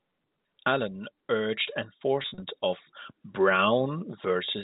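From 2.22 to 2.42 s there is packet loss with pitch repetition. About 120 ms goes missing in bursts up to 40 ms. Each gap is filled by repeating the last pitch period, so it sounds briefly held and buzzy.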